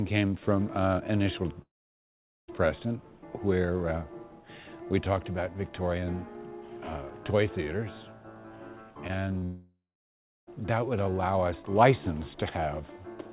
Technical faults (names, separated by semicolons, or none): long network dropout; short concealed packet loss